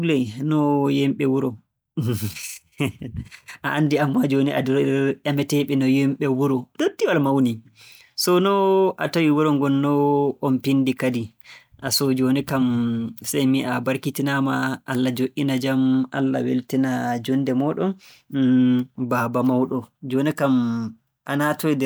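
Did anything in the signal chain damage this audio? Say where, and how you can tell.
No, nothing in the signal chain damaged this audio.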